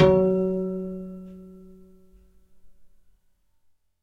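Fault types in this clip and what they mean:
crude rate conversion: from 2.09 s on, samples get dropped or repeated without filtering, fitting a 48 to 44.1 kHz change, so a gritty inharmonic fizz sits around 40 dB down.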